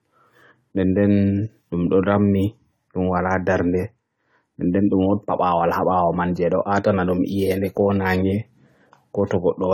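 Across the whole speech clip there is generation loss: a swirly, hollow smear and softened consonant attacks, likely from about seven rounds of AAC-LC coding near 64 kbit/s. Unlike a single low-bitrate pass, the artefacts sound heavier than that rate alone would explain.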